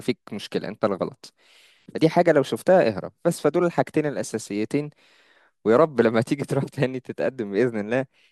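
No technical faults can be heard anywhere in the recording. There is no event in the speech that needs a timestamp or an explanation.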